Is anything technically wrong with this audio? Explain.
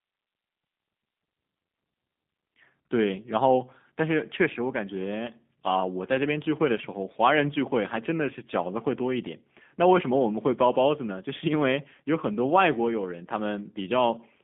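Yes, the whole clip has been through the G.729 codec, and it shows from start to finish. The speech sits in a narrow telephone band, roughly 150 Hz to 3.6 kHz, with nothing above that. The codec rebuilds each 10 ms frame from a vocal tract filter, a pitch estimate and a handful of pulses, which fits an 8 kbit/s VoIP link. You can plainly hear it as a slightly rough, buzzy, synthetic edge on the speech.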